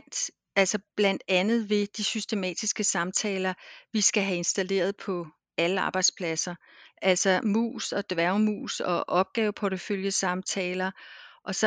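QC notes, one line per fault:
Nothing to flag on this speech recording; no faults turned up anywhere in it.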